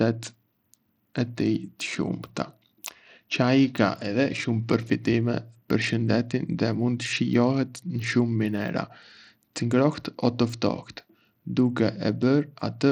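From start to finish the speech carries plainly audible coding damage, likely from Bluetooth SBC compression at a starved bit pool, which fits a rate near 80 kbps. The codec splits the sound into a few wide sub-bands and hands the top ones almost no bits, so the treble flickers in and out while a gritty, aliased haze sits on the voice. Unlike a clean low-pass, the highs aren't simply gone. They sputter unevenly.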